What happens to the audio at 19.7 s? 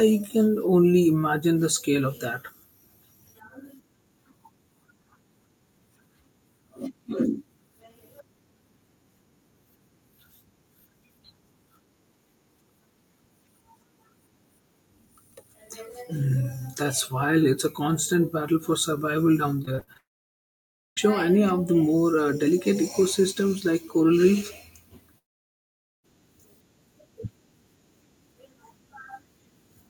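From 19.65 to 19.97 s there is repeated packet loss, heard as a robotic sound. Short holes of up to 40 ms recur, each patched by stretching the previous sound, so about 37% is filled in. Unlike a single dropout, the rapid chain of patches sounds choppy.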